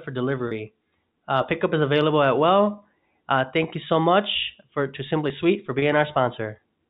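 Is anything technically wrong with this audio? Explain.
Yes. Packet loss with pitch repetition occurs twice in this speech, at 0.48 to 0.51 s and 5.79 to 5.82 s. Each gap spans 30 ms, consistent with a single lost packet, and is bridged by repeating the last pitch period, giving a brief held buzz. On a waveform this appears as identical repeated cycles, and on a spectrogram as frozen harmonic stripes. The telephone band, cut off at 4 kHz by the G.711 coding, carries both events.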